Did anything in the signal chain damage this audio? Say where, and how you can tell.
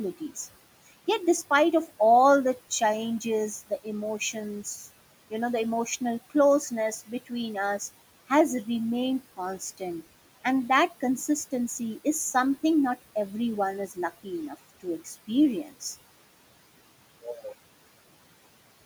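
Yes. Speech cut by the noise suppressor occurs at 7.06 to 7.32 s, 14.80 to 15.07 s and 15.64 to 15.82 s, in the call-processing stage. In each span, parts of the speech dip by about 16, 16 and 9 dB, each for roughly a tenth of a second or a little more, so syllables sound swallowed. The suppressor treated those low-level stretches as noise and attenuated them along with the room noise, which sits about 20 dB under the speech.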